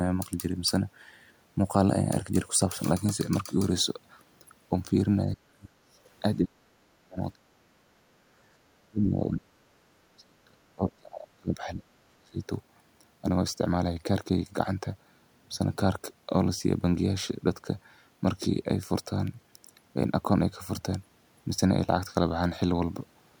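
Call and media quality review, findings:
Speech suppressed in double talk, likely echo canceller unable to separate near talk from loudspeaker echo during overlap, attenuating both. Speech drops sharply, up to around 40 dB, at 5.33–5.91 s, 6.41–8.10 s, 8.78–9.63 s, 9.97–12.40 s.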